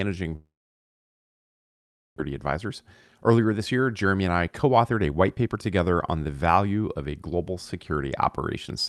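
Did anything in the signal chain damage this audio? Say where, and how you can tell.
Yes. At the network stage there is a long network dropout, likely a loss of incoming packets, from 0.35 s to 2.20 s. The receiver stretches the last sound into a decaying buzz, then holds near-silence for about 1.7 s. When the speech resumes, roughly 1.4 s of it is simply gone, and the stream has picked up around 0.4 s of extra delay.

The jitter buffer then works that delay off with a jitter buffer speed-up from 2.27 s to 5.57 s, ending just before "together on the value". It repeatedly cuts out short pitch-period-length slices, about 0.4 s in total, so the speech runs roughly 12% fast at unchanged pitch and sounds hurried. The Opus call path itself carries its normal coding noise, with the top end limited to 12 kHz.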